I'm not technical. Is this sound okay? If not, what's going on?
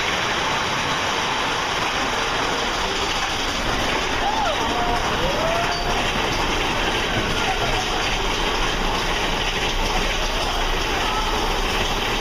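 No. There are lost LE Audio frames, a Bluetooth dropout, at 0.96–0.98 s, at 6.99 s and across 10.41–10.51 s. The last one is several brief gaps spread over about 100 ms. At each gap the receiver patches in a noisy smear built from the sound just before it.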